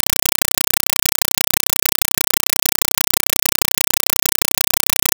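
A speech recording is replaced for its whole length by a compressed stream played as audio: loud, chattering static in 5.33 ms bursts repeating 31.25 times a second with silence between them. That regular burst-and-gap rhythm, which fits an undecoded 256 kbps AC-3 stream, sets it apart from random broadband noise or hiss.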